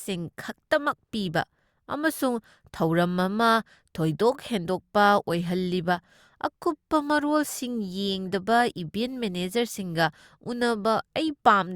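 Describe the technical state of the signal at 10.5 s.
At 10.5 s the speech signal runs intact, with no dropout, clipping, glitch or other audible fault at that moment.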